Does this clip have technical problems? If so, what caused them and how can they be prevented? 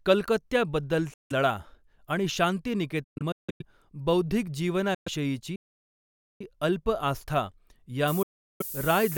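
Yes. The speech cuts out at 1.14 to 1.32 s, 3.04 to 3.62 s in scattered bits, 4.94 to 5.08 s and 8.23 to 8.62 s, then picks up further along. That looks like a Bluetooth dropout, likely from packets reaching the headphones too late and getting thrown away. Keeping the phone close and clear of Wi-Fi congestion, or using a wired connection, should prevent it.

From 5.56 to 6.41 s the sound freezes into silence for almost a second, then carries on with "अल्प आस्था". That's a playback stall, likely the player starving for data or its thread getting blocked. A bigger playback buffer and a less loaded device should prevent it.

From 8.08 s to the end, just after "अल्प आस्था", there's a thin, steady hiss that climbs toward the top of the band and sits nearly as loud as the speech. That's low bit depth with noise shaping: the audio has been squeezed down to about 6 bits, and the rounding error has been pushed up into the highs. 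Keeping the export at 16 or 24 bits should prevent it.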